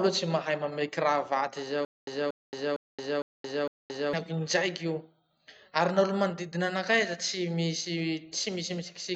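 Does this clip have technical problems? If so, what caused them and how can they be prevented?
Yes. From 1.85 to 4.13 s there's a stutter with silent gaps: the same 234 ms burst of speech plays five times, each followed by 223 ms of dead silence, repeating every 457 ms. That's likely a stalled stream replaying its last fragment on each retry. A larger playback buffer would prevent it.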